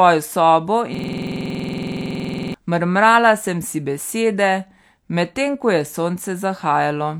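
From 0.95 to 2.54 s, a system hang loop: the driver froze, replaying one 46 ms buffer (fits 2048 samples) as a 21.5 Hz machine-gun stutter.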